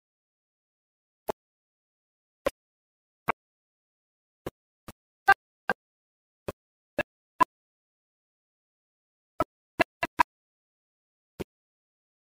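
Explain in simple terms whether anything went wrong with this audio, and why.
Something went wrong once, from 2.47 to 2.50 s, where there is damaged data in a compressed stream. A small piece of the stored or transmitted audio file was corrupted, so the player's decoder could not read those few bytes properly. It loses its place and has to hunt for the next readable chunk before carrying on. What you hear is a short, unnatural blip lasting about three hundredths of a second.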